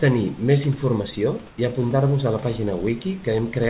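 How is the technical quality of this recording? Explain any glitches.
There's one short glitch to flag. The audio is band-limited, with nothing above 4 kHz, and there's a steady room hiss about 28 dB under the speech.

From 1.48 to 1.58 s there's comfort noise in place of the background. For about 100 ms, the real background, sitting about 27 dB below the loud parts, turns into a smooth, featureless hiss, roughly 1 dB quieter. That's likely the sender pausing transmission in a gap while the receiver fills in synthetic noise.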